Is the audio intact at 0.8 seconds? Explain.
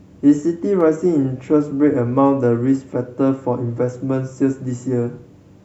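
No. An electrical switching spike lands at about 0.81 s: a sharp snap laid over the speech, peaking fairly low at around -25 dBFS. It is likely a nearby switch, motor or static discharge arcing briefly, with the audio line picking up that burst.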